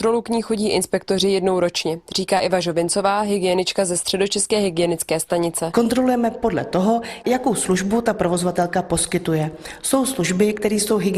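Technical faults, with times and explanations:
2.37 to 2.41 s, short concealed packet loss: about 20 ms of audio arrived too late to decode, and the receiver extended the preceding sound across the gap before crossfading back. It is heard as a brief smear. On a spectrogram, the preceding sound's spectrum continues flat and slightly blurred; the waveform repeats without a true break.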